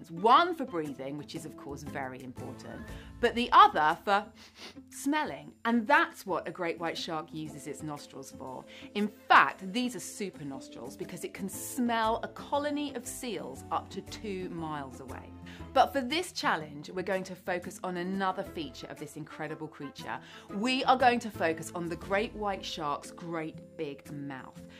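Nothing stood out as a technical problem anywhere in the audio on listening.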